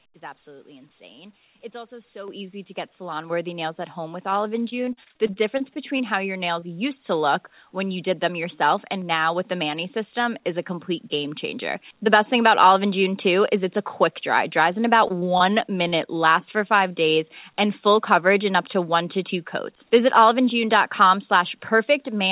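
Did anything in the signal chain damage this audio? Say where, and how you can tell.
Yes. The level jumps abruptly at 2.28 s (about 8 dB), 3.3 s (about 5 dB) and 11.54 s (about 1 dB), with voice and background rising together. This is microphone volume stepped up: call processing raised the input gain in single steps.

From 4.7 to 6.64 s and again from 15.08 to 16.09 s, the speech turns choppy and robotic. This is repeated packet loss on the network. Holes of up to 41 ms are patched by extending the last sound, within a call path whose 4 kHz ceiling fits a G.711 codec.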